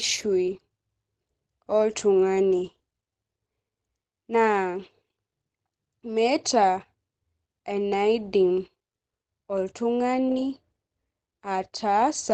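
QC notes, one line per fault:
throughout, Opus compression: the speech sounds muffled and hoarse, with nothing above 12 kHz, likely Opus in its low-rate speech mode around 16 kbps.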